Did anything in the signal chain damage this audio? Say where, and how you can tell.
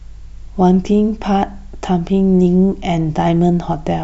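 No, there's no audible sign of damage at any stage of the chain in this speech.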